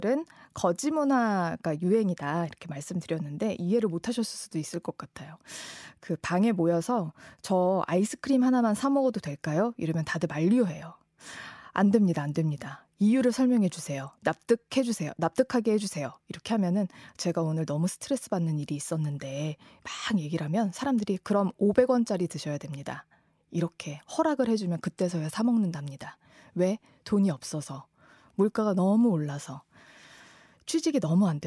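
No technical faults are audible anywhere in the recording.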